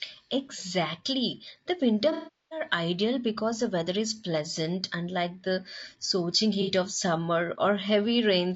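Throughout the clip, the speech has likely passed through low-delay AAC compression at a low bitrate, something like 32 kbps AAC-ELD. The codec works on short low-delay frames, and at this bit budget they are coded coarsely. The result is plainly audible: the voice sounds rough and grainy, noise fills the gaps between harmonics, and the top band sounds thin and synthetic rather than natural.

From 2.12 to 2.62 s, just before "ideal because the weather", there is AAC frame loss with concealment. Around 390 ms of coded audio never reached the decoder. It bridged the gap by repeating and reshaping the last good spectrum, then faded that fill down as the loss continued. The sound smears into a noisy, static patch, decays toward silence, and then fades back in as real frames resume.

A second, much shorter AAC frame loss with concealment runs from 6.62 to 6.71 s, between "pleasant unlike the scorching" and "of summer". 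Only about 60 ms of audio was missing, so the decoder's guess from the previous spectrum covers the gap without fading out. What is heard is a brief smeared, phasey blur in place of clean speech rather than a dropout.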